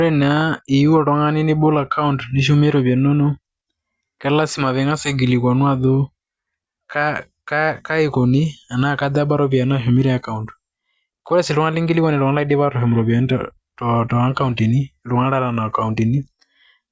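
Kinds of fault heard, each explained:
No audible faults are present in this recording, and no fault category applies.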